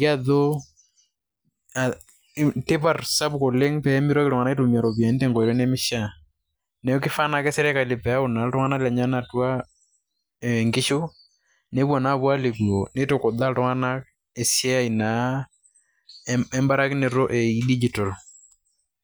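No technical faults can be heard anywhere in this speech recording. Nothing in the audio stands out as an event worth marking with a time.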